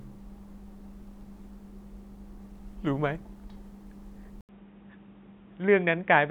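Speech clip, and at 4.41 s it suddenly goes dull and boxy for the rest of the recording. That sounds like an input switched to a poorer device, likely a second mic or a headset's call profile taking over. There's a brief gap of about 80 ms at the switch, then nothing above roughly 3.8 kHz, and a different noise floor sits around 35 dB under the speech. Loudness stays about the same, so it's really the tone that changes.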